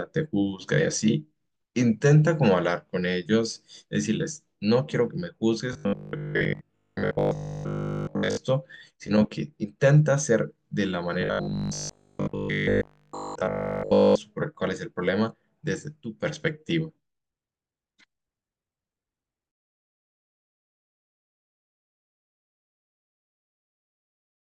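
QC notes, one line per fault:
5.73–8.37 s and 11.21–14.19 s, robotic sound from repeated short buffers: a rigid metallic 50 Hz buzz, likely a 20 ms chunk replayed while late audio is skipped. It covers most of the first stretch and all of the second. The spectrogram shows rigid harmonics every 50 Hz, and the waveform shows identical 20 ms cycles.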